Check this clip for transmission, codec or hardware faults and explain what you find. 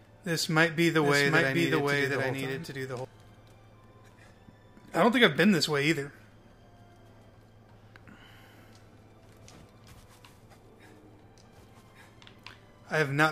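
One fault appears. A doubled audio track runs from 1.03 to 3.05 s. A second full-band copy trails by roughly 0.7 s, about 5 dB quieter, starting and stopping abruptly. It likely comes from a slower parallel capture path.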